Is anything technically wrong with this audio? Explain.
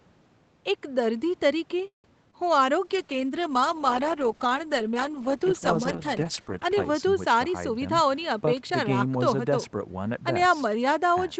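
Yes, there are four separate faults in this speech clip.

Call audio freeze, 1.87 to 2.06 s: the jitter buffer likely ran dry while packets were held up. The last sound stretches briefly, then about 120 ms of silence follows, and the speech resumes where it left off after a 165 ms gap, with nothing lost.

Short concealed packet loss, 2.31 to 2.35 s: about 20 ms of audio never reached the decoder in time, so the receiver extrapolated from the preceding sound to cover it and crossfaded back. The result is a quick smear or wobble in the speech.

Call bitrate drop, 2.82 to 8.46 s: the bandwidth estimate fell and the Opus encoder went from 32 to 9 kbps, sitting at the bottom for about 4 s. The coarser coding makes the speech rough and watery, duller than the 8 kHz band heard before it.

Jitter buffer speed-up, 7.49 to 9.69 s: with more audio queued than its target, the receiver trimmed pitch-period slices repeatedly, removing around 150 ms. 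Speech runs at about 107% speed with unchanged pitch, sounding slightly hurried, and this overlaps the end of the low-bitrate stretch.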